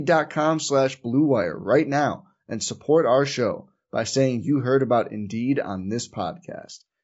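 From start to finish, the speech sounds rough and grainy. The damage is plainly audible. Noise fills the gaps between the pitch harmonics. The top band sounds thin and partly synthetic. This is likely low-delay AAC compression, the AAC-ELD kind used for video calls. Its short frames cannot separate closely spaced harmonics well. They also eat into the bit budget. The coarseness fits a bitrate of about 32 kbps.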